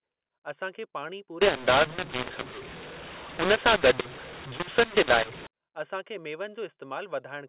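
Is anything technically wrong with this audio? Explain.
Yes. From 1.41 to 5.47 s, just after "असां खे पाणी" until "असां खे", the speech suffers a mu-law and A-law mix-up: telephone audio coded as G.711 mu-law at 8 kHz is decoded as A-law. Each 8-bit code maps to the wrong level, so loudness is scrambled, the speech turns harsh and distorted, and near-silent samples are lifted into audible noise that fills the pauses.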